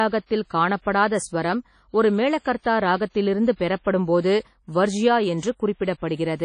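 Speech runs throughout with a ringing, washy quality and a hiss that swells and fades with the signal, and nothing is present above 10.1 kHz. This is likely WMA compression, fitting a low bitrate around 32 kbps. Unlike a plain low-pass filter, it smears noise across tens of milliseconds and drops weak detail.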